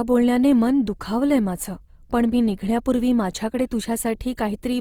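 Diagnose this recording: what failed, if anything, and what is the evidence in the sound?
Opus compression, heard from start to finish, is a codec-stage fault. The speech has a grainy, rough texture where band energy survives but fine detail is replaced by folded or noise-filled content, with little of MP3-style swirling. Bandwidth stays full, reaching about 20.4 kHz, so the encoder held its music (CELT) mode rather than narrowing. The plainly audible damage likely comes from a low bitrate, and the graininess fits roughly 24 kbps.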